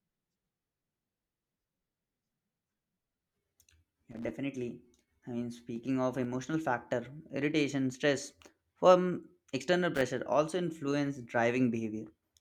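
An irregular burst of crackle and scratching breaks into the speech from 4.11 to 4.31 s, and again from 9.95 to 10.02 s, just before "also influence". This is loose connector crackle: a worn or dirty contact rapidly making and breaking, chopping the signal.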